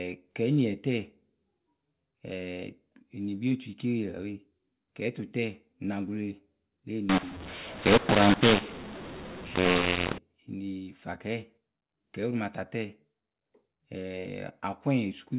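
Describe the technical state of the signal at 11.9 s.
At 11.9 s the speech is intact, carried through the telephone-band mu-law G.711 path with its 8,000-sample-a-second narrowband sound and no fault at that moment.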